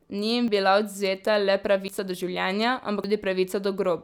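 A speech clip with three abrupt jumps in the audio, at 0.48 s, 1.88 s and 3.04 s. Each is a jump where the sound skips forward with no gap of silence. The first loses around 40 ms. The later two lose around 70 ms each. The likely cause is a dropped buffer (overrun). Samples were overwritten before being collected, so the audio on either side is spliced together.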